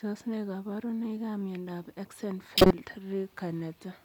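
At 2.58 s the speech is interrupted by a corrupt frame decoded. Some of the compressed data was damaged, but the decoder played it anyway. It read gains and codes that were wrong. Energy landed at frequencies where the speech had none. The result is a harsh, chirpy burst of noise. It lasts until 2.71 s, about 130 ms, which fits a handful of consecutive damaged frames. It is loud, peaking near about -10 dBFS.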